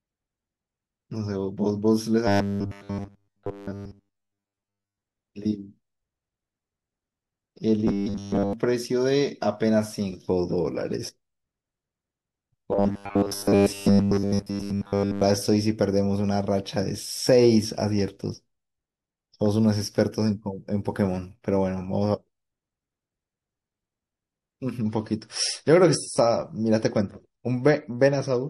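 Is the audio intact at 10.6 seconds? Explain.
Yes, the speech at 10.6 seconds is intact, with no fault at that moment.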